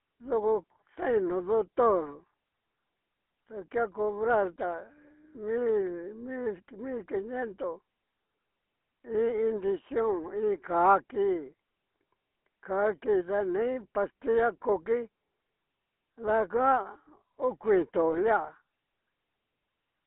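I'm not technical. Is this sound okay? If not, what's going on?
No. The whole recording went through the GSM full-rate codec, an old mobile-phone squeezer, so the speech sounds buzzy and gravelly, with nothing above about 3.4 kHz. Right near the end, from about 18.10 to 18.18 s, GSM bit errors, corrupted bits from a weak signal, make the voice briefly squawk and gargle.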